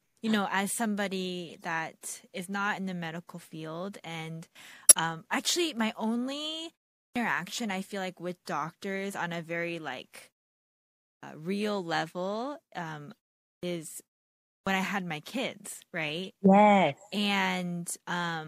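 Speech, with three kinds of technical fault. Between 1.45 and 1.63 s, compressed frames are skipped: about 20 ms of audio never plays, so the sound jumps ahead. On a spectrogram it shows as a discontinuity in the harmonic tracks. From 4.86 to 4.92 s, a corrupt frame is decoded: damaged data across a few frames is played anyway. Misread gains and codes throw energy into the wrong frequencies, producing a brief squeak or noise burst peaking at about -5 dBFS. A spectrogram shows it as an isolated broadband or misplaced smear lasting a few tens of milliseconds, out of line with the surrounding speech. Four clipped starts after a pause follow, at 7.03, 11.12, 13.50 and 14.56 s. After silences of 0.34, 0.87, 0.37 and 0.55 s, the output device has to wake or relock, and it swallows the first 131, 111, 134 and 111 ms of the sound that follows. Speech therefore begins abruptly, already mid-onset and missing its first sounds. 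On the waveform, each phrase appears to switch on at full amplitude with no rising attack, and the spectrogram lacks the usual onset consonant energy.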